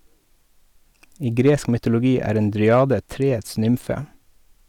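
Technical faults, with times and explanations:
1.40 to 1.87 s, hard clipping: the speech peaks overdrive a stage by about 4 dB, so their tops are sliced flat. Those squared-off tops add harmonics high in the spectrum, heard as a gritty crackle leading into "er en".
2.67 to 2.93 s, hard clipping: just after "er en" the level again exceeds the ceiling, by about 2 dB. The shallower overload flattens fewer peaks, so the added high harmonics give a lighter crackle on the loudest moments.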